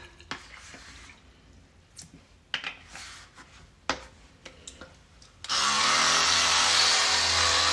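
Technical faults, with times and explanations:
No technical faults can be heard anywhere in this audio.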